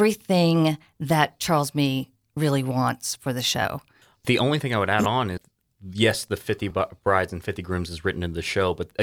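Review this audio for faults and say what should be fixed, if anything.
Repeated buffer faults occur at 3.63–3.65 s after "really wants for the", at 5.05 s after "thing I would add", and at 6.70 s before "brides and". In each, one 10.7 ms piece replays, which fits a 512-sample buffer. The first piece repeats twice and loses about 20 ms. The others repeat once. Larger buffers or higher audio-thread priority would keep playback from running dry.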